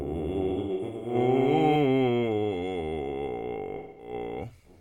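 A doubled audio track runs from the start of the music to 1.76 s, already under way as it begins. A full-band second copy trails the original by roughly a fifth of a second, sitting about 5 dB lower, with no decay or room colouring, and it cuts off abruptly at 1.76 s. The likely cause is the same signal captured twice, once through a slower path, or an edit holding two copies out of step.

AAC frame loss with concealment appears twice. From 0.52 s to 1.14 s, scattered gaps totalling about 341 ms over roughly half a second, the longest run around a tenth of a second, leave smeared, phasey patches where the decoder rebuilt missing stretches from the last good spectrum. That fits about eight lost frames. From 3.76 s to 4.13 s, about 213 ms, consistent with five frames, is filled the same way and sounds noisy and blurred.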